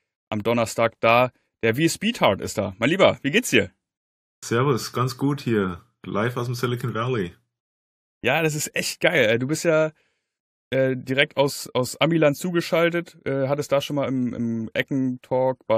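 No technical faults detected anywhere in the speech recording.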